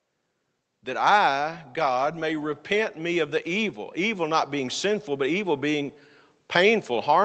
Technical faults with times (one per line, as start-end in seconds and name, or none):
1.98-6.03 automatic gain rising